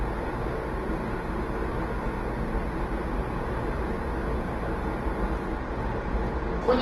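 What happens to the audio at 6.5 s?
At 6.5 s the sound is rough and grainy, with tones smeared into noise. This is likely Opus compression in its music mode, present for the whole clip, which fits a rate near 16 kbps. With too few bits, the encoder keeps each band's energy but fills the detail with noise or folded copies. A spectrogram shows a hard ceiling at 12.2 kHz and hazy, noise-textured bands rather than clean holes.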